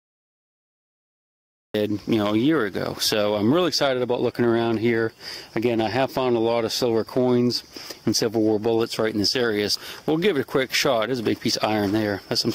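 The clip opens with digital silence until 1.74 s, where the sound enters abruptly, already in progress. This is a cut-off start: capture or streaming began late, so there is no natural attack or fade-in, only a hard edge into mid-sound content.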